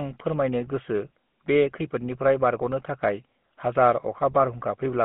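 From start to finish the speech carries the GSM full-rate codec's signature damage, plainly audible throughout. The codec rebuilds each voice from a vocal-tract filter fed by a sparse, regularly spaced pulse excitation, which gives a buzzy, gravelly roughness consistent with a roughly 13 kbps mobile channel. The band runs only from 150 Hz to 3.4 kHz. A spectrogram shows a hard ceiling at 3.4 kHz with nothing above it, smeared harmonics, and a grainy texture.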